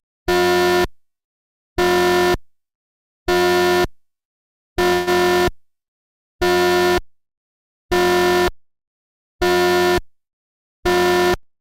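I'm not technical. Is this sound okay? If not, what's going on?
No. At 4.93 s the sound briefly stalls for about 0.15 s: instead of moving on, it smears into a short fading buzz, then carries on exactly where it left off, with nothing skipped. This is a call audio freeze, likely caused by a brief hold-up of the data on its way to you. The receiving end ran out of sound to play, so it stretched the last bit to fill the wait. Everything after that point arrives slightly later than it should.

From 10.08 s to 11.33 s the sound runs noticeably quick, about 11% faster than normal, yet it doesn't go higher in pitch. It can feel a little rushed. This is a jitter buffer speed-up. Extra sound had piled up waiting to be played. To catch up, the receiver snipped out many tiny slivers, adding up to roughly a seventh of a second. That brings the timing back on track.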